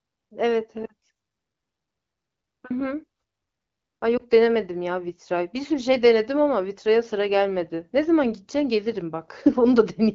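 At 4.17 to 4.22 s, a lost AMR speech frame: the decoder bridges the gap by replaying the last good pitch and vocal-tract settings at reduced gain, heard as a brief dip or warble. On a spectrogram the harmonics smear flat and fade for a moment; the waveform shows a short drop in amplitude. The surrounding wideband sound fits AMR-WB at around 12.65 kbit/s.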